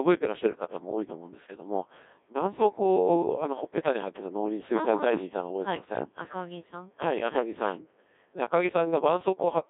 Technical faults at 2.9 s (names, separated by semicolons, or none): Codec 2 vocoder